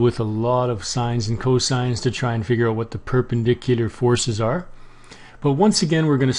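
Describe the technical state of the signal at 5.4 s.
At 5.4 s the signal is intact, with no audible fault.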